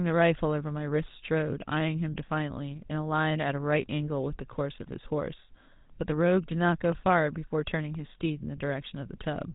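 The whole recording passes through a GSM full-rate codec, and the damage is plainly audible. Nothing survives above about 3.8 kHz, and the coarse pulse-driven vocal-tract model gives the speech a buzzy, gravelly roughness, consistent with the 13 kbps full-rate coder.

From 0.79 s to 8.97 s, periodic USB or driver dropouts remove roughly half a millisecond of audio every 1.024 s, about ten times in all. Each gap is filled with silence, so the speech carries a regular tick while signal is present.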